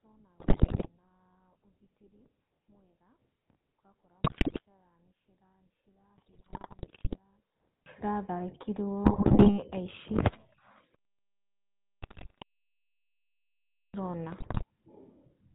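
We've got a speech recording here, and the whole thing has gone through the GSM full-rate codec at 13 kbps. The damage is easy to hear. Nothing gets through above 4 kHz, and the voice has that buzzy, gravelly roughness you get when the codec rebuilds the vocal tract from a thinned-out pulse excitation that keeps only every third sample. For the first 7.86 s the speech nearly disappears, dropping by about 34 dB to a faint remnant, and then it comes back at full strength. That's most likely one channel inverted: one side of the stereo pair has flipped polarity, so summing to mono cancels everything the two channels share and leaves only their small difference. On top of that there are GSM bit errors in six bursts, at 0.4 to 0.89 s, 4.24 to 4.61 s, 6.18 to 7.18 s, 9.04 to 9.59 s, 12.02 to 12.43 s and 14.4 to 14.64 s. In each one the voice breaks into squawks, pops and gargling. Corrupted bits are reaching the decoder, and when they land in the filter, pitch or gain parameters, the spectrum warps or the level jumps frame after frame while the burst lasts. 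The first two bursts have the highest error rates, around 11%. The others run closer to 4 to 6%.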